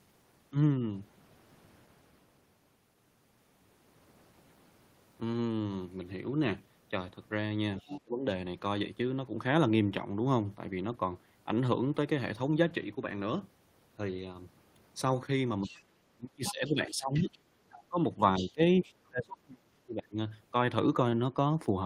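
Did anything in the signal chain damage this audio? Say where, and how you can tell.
Yes, and it all sits in call processing, in the echo canceller. The talker's speech suppressed in double talk shows up three times: 7.81 to 8.25 s, dipping by about 25 dB; 15.62 to 17.97 s, with roughly two seconds pulled down by up to about 30 dB; and 18.39 to 20.17 s, about a second's worth gone, up to about 35 dB deep. Each dip lines up with a second voice, likely the canceller ducking everything when it can't tell near talk from echo.

That second voice is the other side's voice leaking through, likely loudspeaker echo the canceller didn't fully subtract from the mic. You hear it at 7.82 to 8.01 s at about 15 dB under the speech, at 15.62 to 15.83 s at about 20 dB under, strongest at 16.46 to 17.38 s at only about 10 dB under, and again at 17.72 to 19.08 s at about 20 dB under. That's why the suppression kicks in right where it does.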